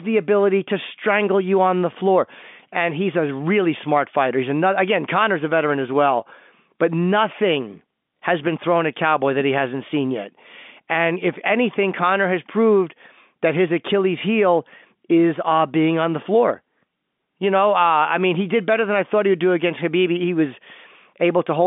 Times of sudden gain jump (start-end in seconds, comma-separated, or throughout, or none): none